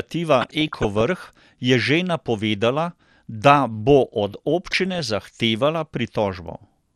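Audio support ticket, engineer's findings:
Dull, band-limited sound with a gurgling, granular grain throughout; upper bands flicker in and out. Cause is likely MP2 compression: too few bits across the 32 sub-bands, so top bands shut off and the rest are coarsely quantised. Consistent with roughly 80 kbps.

Burbling at 0.41–1.01 s and 4.71–4.99 s, the second just after "da bo od". DAB burbling: reception bit errors slipping past error correction into the MP2 data; bad samples blip single sub-bands, bad scale factors make them jump for up to a frame.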